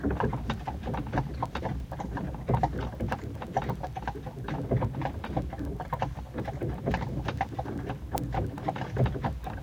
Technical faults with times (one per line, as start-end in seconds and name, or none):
0.14-9.62 word clock ticks